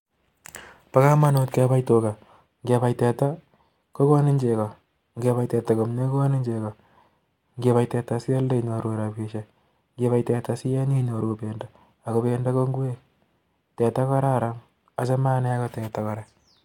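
Speech recording; no technical faults are audible.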